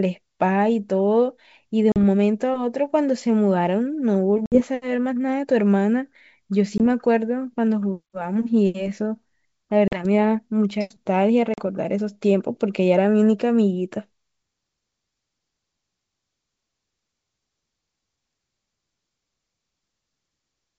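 Packet loss on an ADPCM call produces five hard-edged silent gaps in this wideband G.722 speech: 40 ms at 1.92 s, 60 ms at 4.46 s, 20 ms at 6.78 s, 40 ms at 9.88 s and 40 ms at 11.54 s, each matching one to about three lost packets. After each hole the decoder's predictor and step size no longer match the sender's, so speech resumes with a brief distortion that settles within tens of milliseconds.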